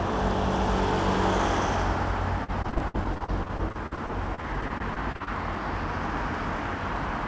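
From 2.44 to 5.28 s, the sound breaks up with repeated packet loss, giving a robotic sound. Packets kept going missing. Each hole was patched by stretching the previous sound, so the audio turns choppy. There are 26 gaps, the longest 60 ms, and about a fifth of the stretch is patched. The call path passes nothing above 8 kHz, which fits a G.722 codec.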